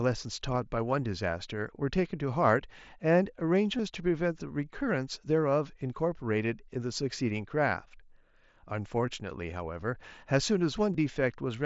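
Concealed Bluetooth headset packet loss shows up in this speech clip at 0.54 s, 3.78 s and 10.93 s. The first covers about 7.5 ms, which fits a single lost frame, and the other two about 15 ms each, consistent with two frames in a row. The receiver bridged each hole by repeating the best-matching recent stretch of waveform, and the speech carries the light graininess of the mSBC link.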